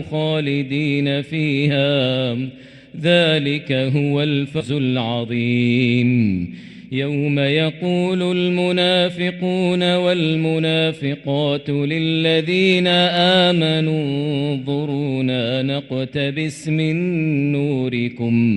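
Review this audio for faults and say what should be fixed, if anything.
At 4.60 s there is a skip ahead: roughly a third of a second of audio is missing, and the two sides are butted together with no fill, so the sound jumps forward abruptly. That stretch was dropped while later audio was already queued. Sizing the jitter buffer to absorb bursts without overflowing would prevent this.

From 4.70 to 5.66 s a jitter buffer speed-up follows: short pitch-period slices are cut repeatedly, so the audio runs at about 109% speed with unchanged pitch and sounds hurried, shedding around a tenth of a second of backlog. Smoother network delivery or gentler, more gradual buffer-depth correction would avoid it.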